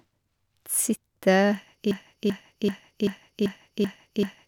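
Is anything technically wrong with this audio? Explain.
Yes. From 1.91 s to the end, a broken-record loop repeats one 0.39 s fragment seven times, likely because playback stalled and resent its last buffer, losing the speech that followed.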